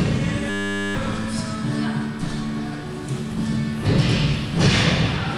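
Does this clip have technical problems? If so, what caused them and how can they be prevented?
Yes. A system hang loop runs from 0.5 to 0.95 s. The system froze while the hardware kept replaying one 10 ms slice. It repeats at 100 Hz, giving a steady buzz. About half a second vanishes. Updating drivers and prioritising the audio thread prevents it.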